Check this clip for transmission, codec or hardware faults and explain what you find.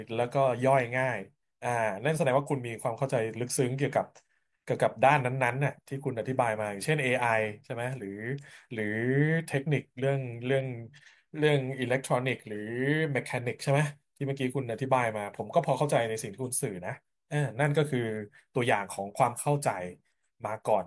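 No transmission, codec or hardware fault can be heard anywhere in this speech recording.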